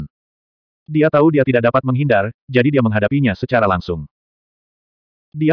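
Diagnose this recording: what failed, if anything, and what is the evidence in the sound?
Nothing failed here that I can hear: the audio holds steady all the way along, with no stage of the chain giving itself away.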